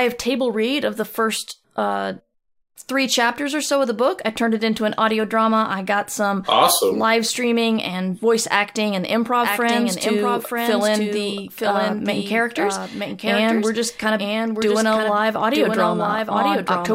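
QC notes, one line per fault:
9.44 s to end, doubled audio track: from 9.44 s a second full-band copy of the speech runs about a second behind the original and a few dB quieter, so every phrase is heard again as a flat, dry repeat with no decay or room colour. It cuts in abruptly and carries on to the end. The likely cause is the same signal being picked up a second time through a slower path, or an edit leaving two copies out of step.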